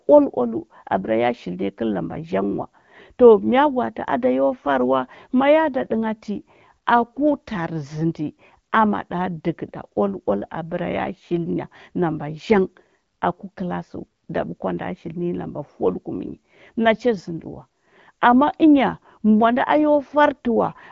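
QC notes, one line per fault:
No faults found; the speech carries the light coding character and the band edge near 7.5 kHz expected of an AMR wideband (HD Voice) path at a rate consistent with 12.65 kbit/s.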